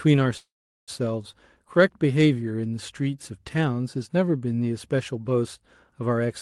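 From 0.37 s to 0.91 s the speech stops and the last sound is held as a fading buzz that drops to near-silence for about 0.4 s. This is a call audio freeze, likely from late packets draining the jitter buffer. The speech then resumes where it stopped, about 0.5 s later, with nothing lost.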